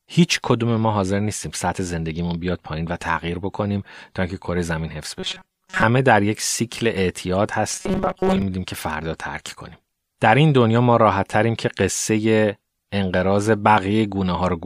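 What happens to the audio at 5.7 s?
The speech turns into a rigid, metallic buzz near 188 Hz from 5.20 to 5.83 s: robotic sound, likely from a short buffer of roughly 5 ms repeated over most of that stretch.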